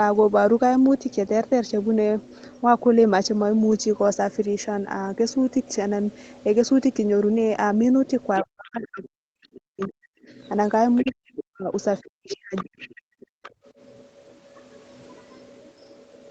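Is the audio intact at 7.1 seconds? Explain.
Yes, the speech at 7.1 seconds is intact, with only the ordinary call-path character of a band that stops at 8 kHz.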